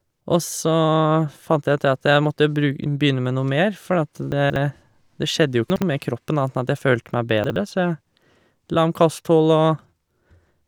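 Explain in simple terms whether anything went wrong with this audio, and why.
Three short jumbled moments come from chunks out of order: at 4.32 to 4.56 s, at 5.7 to 5.82 s between "det skjedde jo" and "med kroppen annet", and at 7.44 to 7.56 s after "følte meg". Small 60 ms pieces of speech play late, so each spot sounds garbled.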